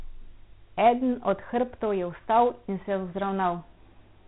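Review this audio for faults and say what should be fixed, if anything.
4-bit ADPCM compression runs through the whole speech clip. Each sample is stored as a coarse step from a prediction. The damage is heavy: gritty hiss follows every loud syllable. Nothing remains above 3.9 kHz, which fits a 32 kbps stream at 8 kHz. Record and deliver in linear PCM or a modern codec at a full sample rate.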